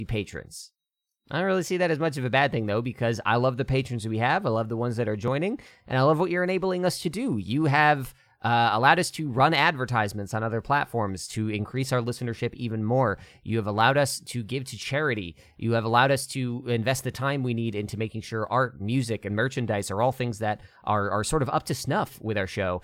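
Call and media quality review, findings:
Dropped buffer (overrun), 5.28 s, between "the ones that are" and "and I love what". Symptom: sound jumps forward, no silent gap. Likely capture-side overrun: input buffer overwritten before the application read it, losing a few milliseconds. Audio on either side butted together, so the waveform steps abruptly. Loss too short to remove a syllable.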